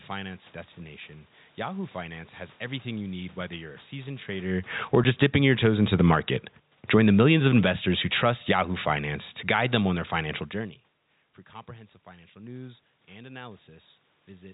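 Telephone-band speech with two bouts of automatic gain falling: about 12 dB from 4.79 to 5.42 s and about 9 dB from 6.79 to 10.43 s. The room noise sinks with the voice, which separates it from the talker simply moving away. At 5.04 s a single 10 ms gap is packet loss filled with silence. Its hard edges set it apart from a smooth fade or level change.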